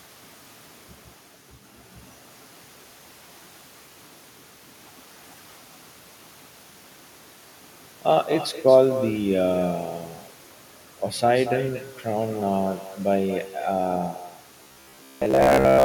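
From the first moment the speech carries an echo with no canceller. Each phrase is followed, after roughly a fifth of a second, by a second copy about 13 dB quieter and thinner. The far end is playing the call through a loudspeaker, its microphone is picking that up, and nothing is subtracting it before it comes back over the network round trip. The result is a persistent shadow trailing every syllable.

From 14.63 s to the end, the speech takes on a robotic sound, most likely from repeated short buffers. It becomes a rigid, metallic buzz fixed at 66.8 Hz that only loosely tracks the speech. That pitch fits a fragment of about 15 ms being replayed over and over while fresh audio arrives too seldom. Most of the real signal in that stretch appears to be skipped in favour of these repeats.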